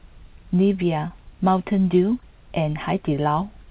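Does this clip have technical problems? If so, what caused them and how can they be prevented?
Yes: short concealed packet loss at 1.08–1.12 s and 2.20–2.24 s, where about 20 ms of speech went missing and was patched by continuing the previous sound. That patch gives a brief smear rather than the silent gap or hard click of a true dropout. The call path is narrowband, with nothing above 4 kHz as fits G.711. Preventing them means a steadier network connection or a deeper jitter buffer, so packets arrive before the decoder needs them.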